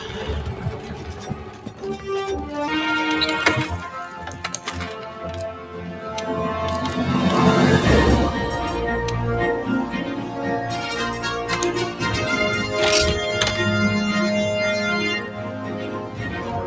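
From start to finish, a noise suppressor built for speech is working on sound it was not designed for. It treats steady tones, ambience and decay as noise and pulls them down. Sharp onsets mostly get through. The held parts sink. The level therefore pumps and flutters, with swings of around 10 dB. The sound also feels thin. The call microphone processing keeps the band below 8 kHz, and that part is normal.

In three places the suppressor goes further and cuts the sound itself. From 0.55 to 2.06 s, the sound drops by up to about 6 dB for most of that span. From 5.55 to 6.05 s, a shorter dip of about 6 dB follows. From 15.2 to 16.41 s, the level sinks again by about 6 dB. In each case, sustained or fading sound loses level and its tail is cut short. Sudden attacks come through almost untouched.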